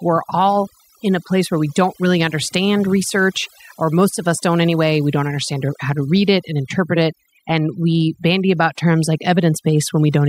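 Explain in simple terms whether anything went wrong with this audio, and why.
Overdone noise removal runs through the whole speech recording. A noise reducer set far too strong cut away frequency bands it mistook for noise, taking quiet parts of the voice with them. The background drops and breaks up into twinkling specks.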